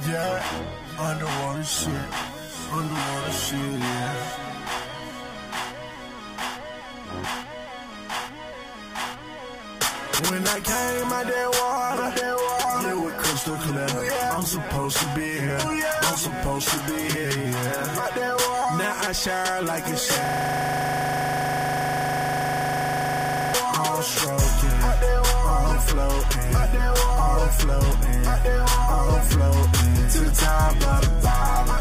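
A system hang loop runs from 20.25 to 23.54 s. The machine or driver stalled while the sound hardware kept replaying its ring buffer, so one 40 ms slice of audio repeats exactly, 82 times, at 25 Hz, which fits a 40 ms buffer. It is heard as a rapid, mechanical stutter at that rate.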